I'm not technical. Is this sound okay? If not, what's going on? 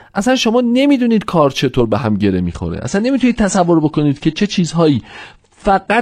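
No. From about 2.44 s to the end, the speech abruptly loses its crisp top end and turns duller, with no pause. That's an adaptive stream at a lower bitrate: the connection slowed, so the player switched to a lower-quality version of the audio.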